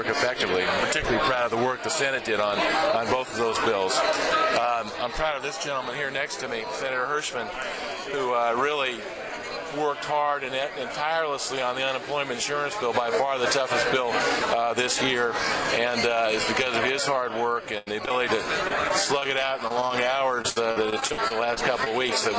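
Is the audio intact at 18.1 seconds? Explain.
No. At 18.1 s the audio is in the second of two back-to-back short concealed packet losses, 18.06 to 18.09 s and 18.09 to 18.12 s. In each, about 20 ms of audio never reached the decoder in time. The receiver bridged the hole by extending the preceding sound, following its pitch if it was voiced or generating matching shaped noise if not, for about 10 ms, then crossfaded back into the real signal. Heard together, the pair gives a brief smear or wobble, and any short consonant in that window can disappear.

This comes right after a burst of packet loss from 17.78 to 18.01 s. There, about 80 ms went missing and was replaced by roughly 85 ms of extended sound that fades as the gap goes on, heard as a held buzz or fading hiss. The audio then resumes slightly further along, with about 9 ms removed from the timeline. Both events sit on a G.722 call path, which leaves nothing above 8 kHz.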